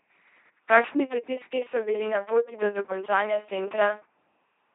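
An LPC-10 vocoder runs throughout this speech, likely at 2.4 kbit/s. Each frame is either a pulse-driven buzz or noise, so it sounds robotic, with nothing above 3.8 kHz.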